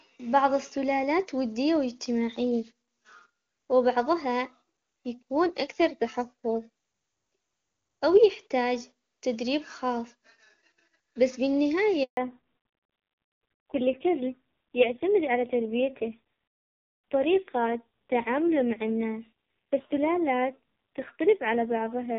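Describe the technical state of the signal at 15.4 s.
Fallback to narrowband, running from 12.17 s to the end of the clip: the call has dropped from wideband HD Voice to an older narrowband codec, so nothing above 4 kHz remains. The speech sounds dull and rough, which fits a low-rate AMR-NB mode.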